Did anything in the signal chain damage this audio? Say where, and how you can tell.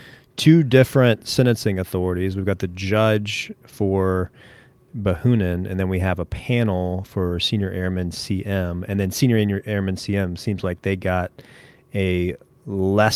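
No, nothing in this speech recording stood out on listening as damage from any stage of the signal chain.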